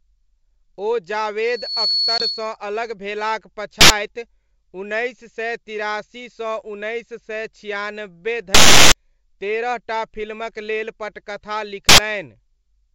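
Speech carried over G.722 wideband telephone coding, with three kinds of fault. Loudspeaker feedback squeal runs from 1.42 to 2.57 s: the microphone re-amplifies the loudspeaker until a 4.4 kHz tone swells over roughly 0.4 s to about 5 dB above the speech, ending before "अलग भेलाक". Packet loss on an ADPCM call at 2.18 to 2.23 s leaves a hard-edged 20 ms hole, fitting about one lost packet, after which the decoder's predictor briefly returns the sound slightly distorted. Invalid numbers at full scale appear at 3.81 to 3.90 s (just after "अलग भेलाक"), 8.55 to 8.92 s (just before "तेरह टा") and 11.89 to 11.98 s. Each is a block pinned at one extreme value far beyond the speech peaks, heard as loud pops around a gap, with lengths of 93 ms and 372 ms that fit 4096- and 16384-sample blocks.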